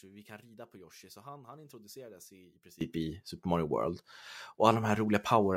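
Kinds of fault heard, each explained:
One channel inverted: likely a channel's polarity was reversed, so summing to mono cancelled the common speech, leaving it about 23 dB lower until 2.81 s.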